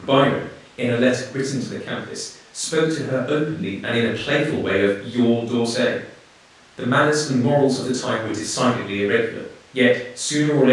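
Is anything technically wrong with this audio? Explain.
No, nothing is technically wrong with this speech recording. No fault can be heard anywhere in it.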